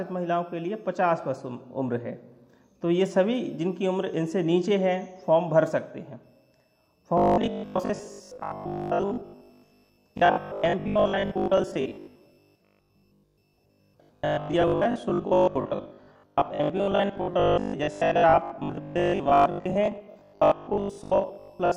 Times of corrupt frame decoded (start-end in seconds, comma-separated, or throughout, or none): none